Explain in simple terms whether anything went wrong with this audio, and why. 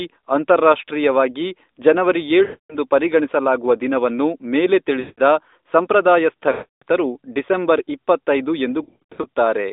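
Lost AMR speech frames break up this phone-line speech at 2.44–2.76 s, 5.00–5.20 s (after "ಪರಿಗಣಿಸಲಾಗುವ ದಿನವನ್ನು ಮೇಲೆ"), 6.52–6.83 s (before "ಡಿಸೆಂಬರ್ ಇಪ್ಪತ್ತೈದು") and 8.84–9.28 s. Unlike a clean dropout, the decoder stretches the last sound and fades it. The final one is a scattered flutter, not a single gap.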